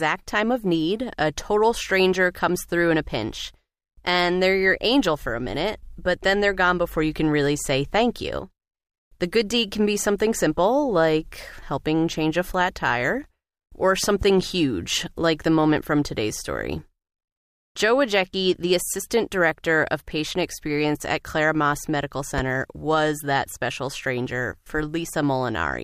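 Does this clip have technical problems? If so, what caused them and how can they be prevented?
Yes. There are two loud pops, each likely a brief voltage spike from a connector, switch, static discharge or driver glitch, which the downstream circuitry then shapes into an audible click. Between 14.04 and 14.24 s, after "a flat tire or" and before "huge like the moment", two pops land in quick succession, peaking about 5 dB above the speech. At 22.38 to 22.41 s, just before "was that special stranger", a single louder pop peaks about 10 dB above it. The speech continues underneath both. Securing cables, avoiding switching or touching gear while recording, and keeping drivers stable would prevent this.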